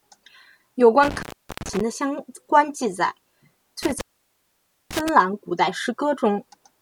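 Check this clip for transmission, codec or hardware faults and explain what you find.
There is a hardware fault: intermittent contact, occurring twice. From 1.03 to 1.81 s the speech cuts out for about 0.38 s, and from 3.83 to 5.09 s it drops for about 0.90 s. A loose cable or plug is briefly losing its connection, so the signal path opens and closes. Each dropout is bracketed by crackle as the contact makes and breaks, with faint hiss left while the line is open.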